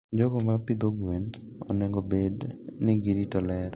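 At 0.52 s a short stall from a late packet interrupts the speech, with the effect settling by 0.73 s. A packet arrived after its playout time, the jitter buffer ran dry, and the receiver stretched the last sound by about 36 ms until it caught up. Unlike packet loss, nothing is skipped and playback resumes exactly where it stopped. The result is a held sound with a faint buzz or dip, heard through telephone-band audio that stops at 4 kHz.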